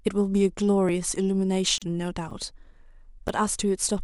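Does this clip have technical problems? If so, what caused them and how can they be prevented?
Yes. Three blocks of digital silence cut this speech at 0.89 s, 2.31 s and 3.28 s, lasting 1, 5.8 and 8.7 ms. The output buffer likely went unfilled in time, and the 5.8 ms block fits a 256-sample buffer. Unlike a codec gap, each drop is instant, with no fade. A larger buffer or a higher-priority audio thread would prevent them.

A gap at a join of encoded pieces opens from 1.78 to 1.82 s, about 37 ms. Two separately encoded pieces were joined with the encoder's start delay and end padding still in place. This hole is longer than the dropouts, and its edges are smeared rather than clicking. Trimming encoder delay and padding, or encoding continuously, would prevent it.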